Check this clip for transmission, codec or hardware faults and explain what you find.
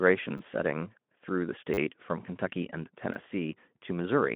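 Three brief stutters stand out, each a repeated buffer fault. At 0.38 s, 1.74 s and 3.14 s, the sound catches for a moment with a hard-edged buzzy flutter lasting about 20 ms, 40 ms and 20 ms. The middle one is longest. Each sounds like a tiny slice replaying back to back, which fits a 10 ms buffer being played again, twice at the outer two and about four times at 1.74 s. New audio reached the output late, so the device looped the last block instead. Through all of this the Speex-coded line stays narrowband, with nothing above about 3.8 kHz.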